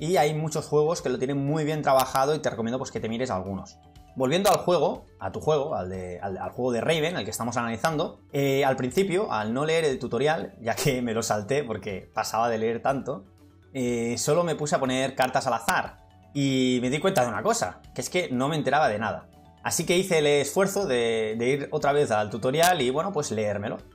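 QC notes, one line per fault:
1.99–2.16 s, 4.46–4.54 s, 7.85 s, 8.98 s, 15.22–15.25 s, 15.69 s, 17.17 s, 22.63–22.69 s: integer overflow. Peaks only about 0–1 dB past full scale wrap to the opposite sign instead of limiting, so each jumps across the entire range, producing violent cracks far harsher than clipping.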